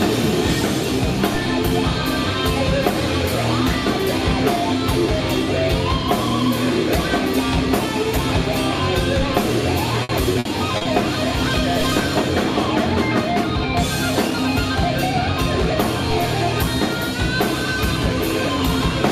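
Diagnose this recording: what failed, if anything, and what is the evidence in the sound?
Repeated packet loss (robotic sound), a network-stage failure, runs from 10.03 to 10.87 s: five gaps, the longest 60 ms, with 200 ms patched by extending the last sound, 24% of the span. On a spectrogram, short frozen, smeared frames interrupt the texture, giving the choppy, robotic quality.

A DC step at 11.81 s points to the converter stage, where the waveform's zero line jumps abruptly. The offset then decays back like a 2 Hz high-pass response. The jump is heard as a low thump and shows as a brief low-frequency burst on a spectrogram.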